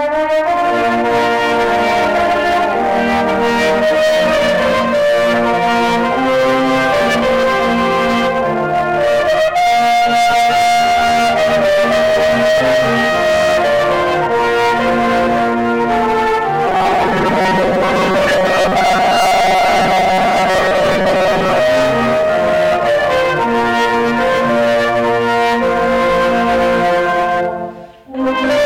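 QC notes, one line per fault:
16.68–21.60 s, robotic sound from repeated short buffers: a rigid metallic buzz at 188 Hz, likely from repeating a 5.3 ms buffer that replaces about half the audio.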